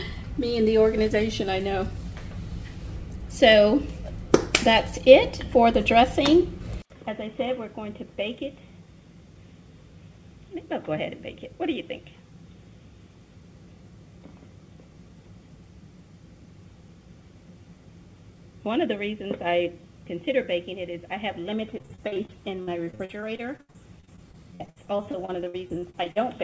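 At 6.82 s the sound drops out for 80 ms, then returns duller and about 10 dB quieter, with a faint new noise floor beneath it. That points to an input switched to a poorer device as the likely cause. On a spectrogram, energy that had reached the call path's 8 kHz limit now stops sharply at 3.8 kHz, and the waveform shows a short flat gap followed by lower amplitude.

From 21.78 s to 26.18 s there is repeated packet loss (robotic sound). Dozens of short holes, the longest 79 ms, are each patched by stretching the preceding sound, so roughly a quarter of that stretch is filled in. It sounds choppy, with pieces missing. A spectrogram shows smeared, repeated frames between brief breaks.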